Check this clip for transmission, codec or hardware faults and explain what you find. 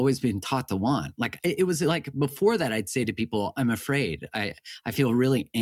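Nothing in this speech recording points to a transmission, codec or hardware problem, so there's nothing here to flag.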